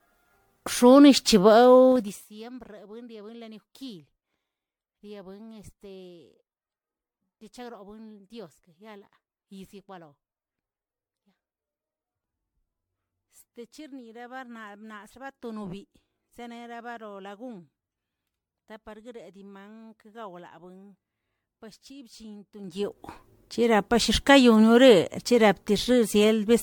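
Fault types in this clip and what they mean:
Generation loss: The speech sounds swirly, smeared and hollow, with blurred attacks and nothing above 19.9 kHz. The likely cause is repeated MP3 decoding and re-encoding, around fifteen passes at roughly 90 kbit/s, with each pass adding fresh quantisation noise and spectral holes.
Zipper noise: From 1.92 to 2.28 s the level drops by roughly 25 dB in unsmoothed 3 dB steps, about 30 a second. Every jump leaves a tiny click, so you hear a quick ticking zip riding on the speech while the level falls.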